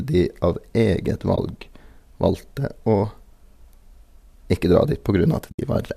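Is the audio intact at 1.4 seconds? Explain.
No. Around 1.4 s, just after "de av eget", the stream suffers AAC frame loss with muting. Two short frames, about 20 ms of sound, never reached the decoder, which filled them with silence by zeroing their spectrum. The overlapping transform windows taper the level down and back up across the gap, so from 1.36 to 1.38 s there is a brief, soft-edged dropout. The surrounding audio carries the mild coloration of low-delay AAC compression, likely AAC-ELD at 64 kbps.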